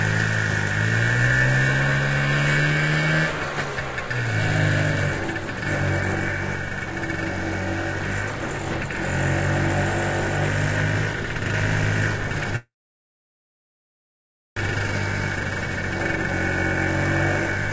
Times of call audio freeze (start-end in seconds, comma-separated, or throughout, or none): 12.56-14.58